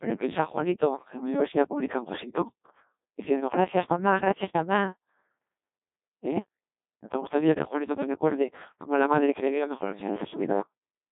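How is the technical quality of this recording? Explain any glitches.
Technical quality is poor, with one fault running the whole way through. The speech has passed through the Codec 2 vocoder, which sends only pitch, voicing, energy and a coarse spectral envelope and rebuilds the voice from sine waves. The result is heavily robotic and buzzy, band-limited to about 200 Hz to 3.7 kHz with nothing above 3.8 kHz, and the degradation fits a very low rate of about 1.2 kbit/s.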